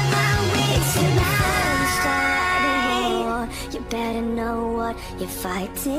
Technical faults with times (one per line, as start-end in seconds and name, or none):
0.00-5.98 crude rate conversion